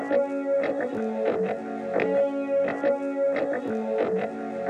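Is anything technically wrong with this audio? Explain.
No, nothing technically wrong can be heard in this audio; the signal stays steady and intact throughout, with no audible defects.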